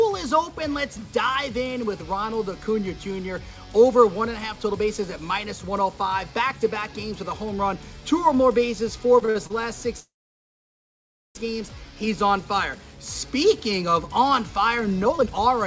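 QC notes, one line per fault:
9.20–9.52 s, repeated stalls (stutter): the sound halts four times within about a third of a second, the longest hold 50 ms. Each hold extends the preceding sound rather than dropping anything, so about 120 ms is stretched in and the passage drags unevenly.
10.00–11.37 s, call audio freeze: the sound holds briefly, then falls to silence for about 1.27 s before resuming exactly where it stopped. The likely cause is delayed packets draining the jitter buffer, so a 1.35 s gap is inserted with nothing lost.
15.05–15.54 s, jitter buffer speed-up: the passage runs at about 143% speed with unchanged pitch, sounding hurried. The receiver trims short pitch-period slices repeatedly, roughly a fifth of a second in total, to shrink the excess buffer delay.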